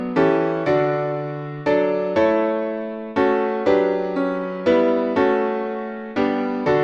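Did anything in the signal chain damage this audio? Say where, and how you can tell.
No, nothing along the chain audibly damages this signal; every stage from capture to playback leaves it intact, with no audible break, distortion or alteration at any point.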